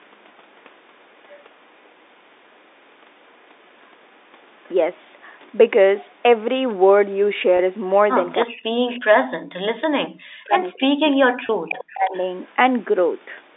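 Faint delayed copies of the talker surface at 1.29–1.42, 3.79–3.93, 4.64–4.69, 5.45–5.5, 8.44–8.96, 11.1–11.16 and 11.78–12.32 s. This is an echo leak, likely from a far-end loudspeaker whose echo canceller let residue through. Unlike room reverberation, which smears into a tail, each copy trails the original by the same 324 ms and sounds like a separate ghost. The early ones sit about 30 to 35 dB down, and the later ones rise to about 20 to 25 dB below the speech.

At 7.57 s the sound briefly holds on a buzzy, repeated tone. This is packet loss with pitch repetition: 20 ms of audio went missing, which fits two lost 10 ms packets, and the receiver bridged the gap by looping the last pitch period. A second, slightly longer hold of 30 ms comes at 11.46 s. A click or dropout would cut the sound, whereas here the gap is filled by a sustained, faintly mechanical note.

From 8.46 to 12.14 s the talker repeatedly dips, thins and cuts out in pieces for about 3 s in total, with the deepest drops near 40 dB. 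This is speech suppressed in double talk, likely where the echo canceller, unable to separate the near talker from the loudspeaker echo while both sides spoke, turned everything down. It differs from packet loss because it spans seconds and tracks the overlap, and the echo bursts at 8.44 and 11.78 s overlap it.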